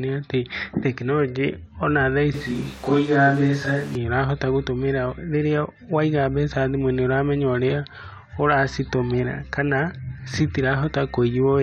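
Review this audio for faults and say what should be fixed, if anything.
The close microphone's feed likely dropped out, leaving a distant microphone from 2.34 to 3.95 s, after "atĩ tekinoronjĩ ona thaa". The speech turns abruptly roomy, hollow and thinner, at the same level but with room noise around 25 dB below it, until "ũrahota gũtũmĩra rĩrĩa waiga". Secure and monitor the close microphone's connection so the recording never falls back to the distant source.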